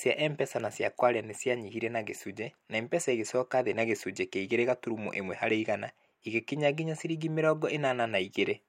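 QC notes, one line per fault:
Nothing to flag on this speech clip; I didn't hear any technical problems anywhere in it.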